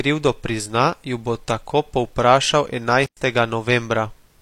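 At 3.04 s an intermittent contact briefly opens the line for about 106 ms, cutting the speech to near silence with crackle at both edges. The waveform shows a flat gap, and the spectrogram shows a blank band bracketed by broadband clicks.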